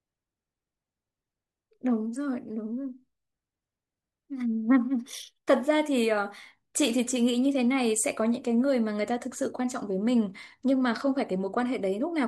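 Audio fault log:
0.71–11.92 s, clock slip clicks: faint regular ticks about every 0.7 s, likely two unsynced clocks some 30 ppm apart, each slip dropping or repeating one sample.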